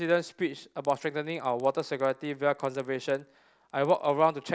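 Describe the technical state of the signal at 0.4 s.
At 0.4 s the speech carries a resampler restarted on every block fault, which runs through the whole clip. The conversion appears to go from 44.1 kHz down to 16 kHz, and each 50 ms block is converted on its own. At every block edge the filter lacks the real neighbouring samples, so a small error lands there. The result is a tick every 50 ms, 20 times a second. It is present only while sound is present.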